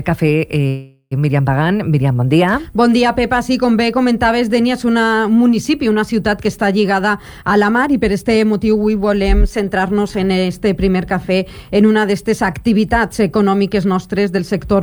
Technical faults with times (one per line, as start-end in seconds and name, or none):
0.68-1.13 call audio freeze
7.23-8.90 jitter buffer speed-up
13.96-14.76 jitter buffer speed-up